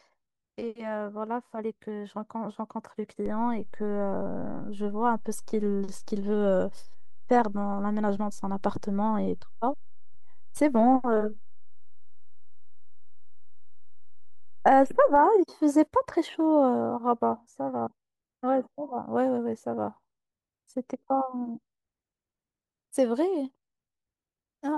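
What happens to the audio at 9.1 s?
At 9.1 s the speech lies inside a DC step lasting from 3.26 s to 15.16 s. The waveform's zero line has jumped by about -31 dBFS and is holding there. Unlike hum, the held offset is silent, and only low thumps mark its start and end.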